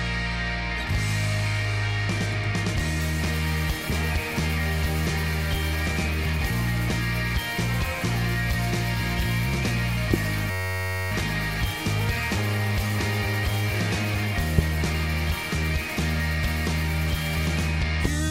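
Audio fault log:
10.14–10.16 s, 14.58–14.61 s and 18.05–18.08 s, loud pop: each is a single hard, sharp pop standing well above the sound, about 20 dB over it for the first two and about 15 dB for the last, while the audio carries on underneath. The likely cause is a sudden voltage step or pulse entering the chain, such as a switch, static discharge or a driver glitch, which the following circuitry shapes into a brief click-thump.
10.51–11.12 s, system hang loop: the sound freezes into a steady, rasping buzz at about 94 Hz for roughly 0.6 s. A 10.67 ms slice of audio, which fits a 512-sample buffer, repeats exactly about 57 times as the hardware keeps cycling one ring buffer while the system is stalled. Such a short loop fuses into a pitched buzz rather than a stutter, and the sound then resumes with essentially nothing skipped.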